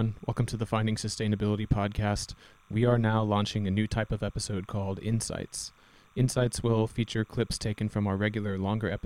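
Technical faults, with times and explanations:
throughout: timecode bleed. A faint chirping warble sits behind the speech for the whole clip, roughly 35 dB below it. Linear timecode from a neighbouring track or cable has leaked into the audio path. The code is a square wave that flips between two pitches, near 1 and 2 kHz, as its bits change. The pattern repeats at 29.97 frames per second, so the chirp is steady and never follows the speech.
throughout: overlap-add ripple. The level rises and falls by about 6 dB around 100 times a second, giving the speech a rough, buzzy, robotic tremolo. The audio was split into windowed frames and then rebuilt, but the overlapping windows do not add up to a constant gain. Each frame therefore leaves a bump and dip in loudness. The ripple rate points to a frame hop of roughly 10 ms.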